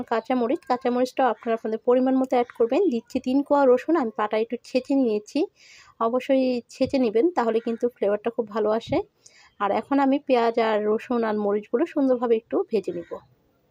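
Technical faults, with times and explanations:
No technical faults are present.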